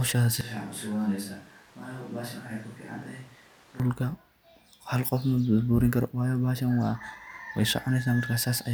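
From 0.41 s to 3.80 s the speech abruptly turns roomy and hollow, loses low end and drops about 10 dB in level, while room noise rises to about 20 dB below the speech. This is most likely a switch to a distant microphone after the close one dropped out. On the waveform the envelope shrinks suddenly at both edges. The spectrogram shows weaker bass, smeared reverberant tails and a raised noise floor between syllables.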